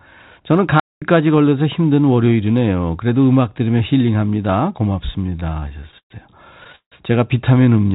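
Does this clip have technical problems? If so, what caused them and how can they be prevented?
Yes. At 0.80 s the speech cuts out and stays silent for about 220 ms, resuming at 1.02 s. This playback stall was likely caused by the player running out of buffered data or having its audio thread blocked. Keeping a larger playout buffer and running audio on a high-priority thread prevents it.

Between 5.16 and 6.12 s the speech drags and stutters through 12 short gaps, the longest 118 ms, with about a quarter of that stretch filled by stretched-out copies of the preceding sound. From 6.64 to 6.94 s four more gaps, up to 160 ms, cover about two thirds of the span. These repeated stalls (stutter) come from packets arriving late, so the jitter buffer kept running dry and the receiver padded each wait by continuing the last sound, nothing actually being lost. A steadier network path or a deeper jitter buffer target prevents this.

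From 7.54 to 7.85 s the speech slows to about 86 % speed at unchanged pitch, with sounds drawn out by about 52 ms in total. This jitter buffer slow-down happened because the receiver repeated individual pitch periods to rebuild its reserve. Reducing network jitter lets the buffer stay filled without stretching.

The narrowband G.711 call path, with nothing above 4 kHz, is part of normal operation rather than a fault.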